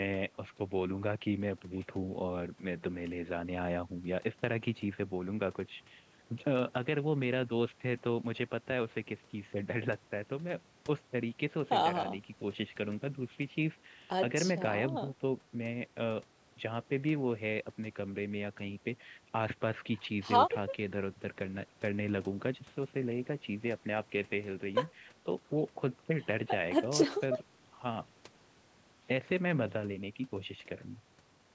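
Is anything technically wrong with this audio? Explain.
No, nothing stood out as technically wrong on listening to this speech recording, which has the ordinary character of audio captured through a call's microphone processing.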